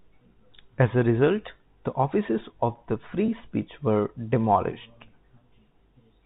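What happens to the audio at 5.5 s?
Nothing goes wrong at 5.5 s: the speech carries on intact through the G.711 telephone coding, keeping its narrow telephone band without any break or added fault.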